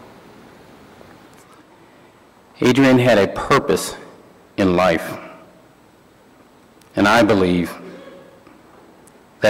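Hard clipping occurs at 2.62–3.75 s, 4.60–4.97 s, 6.98–7.56 s and 9.44–9.50 s. Peaks overdriven by about 5–6 dB are cut flat, giving harsh crackle. The waveform shows squared-off tops, and the spectrogram shows harmonics smeared far upward.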